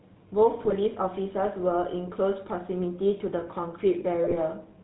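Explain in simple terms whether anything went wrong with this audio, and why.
The whole recording has the GSM full-rate codec's sound: an old phone codec that cuts everything above 4 kHz and leaves voices buzzy and gravelly. There are also two short bursts of GSM bit errors, from 0.63 to 0.76 s and from 4.24 to 4.36 s. Corrupted data reached the decoder, so the speech briefly squawks, pops and gargles.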